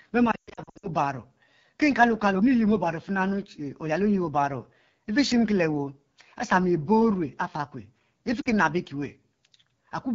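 A speech recording carried over the AMR wideband (HD Voice) codec at a low rate. The whole clip sounds rough and raspy, which fits one of the codec's lowest modes, around 8.85 kbit/s. The band up to 6.4 kHz is built from a pulse-driven vocal tract model, and the top band to 7 kHz is filled with shaped noise. That model-based coarseness sets it apart from the swirly, watery artefacts of transform codecs such as MP3 or AAC at low bitrates.

Lost AMR speech frames appear twice. The first burst runs from 0.31 to 0.89 s, with about 0.36 s of audio missing and scattered across roughly half a second. Its longest unbroken gap is 120 ms. The second is a single short loss of about 40 ms at 8.42 to 8.52 s. In each case the decoder keeps replaying the last good pitch and vocal tract settings while lowering the gain. The sound drops to near silence within two frames, then comes back weak. This distinguishes it from a plain dropout, which cuts to hard silence, and from buffer underruns, which click at the edges.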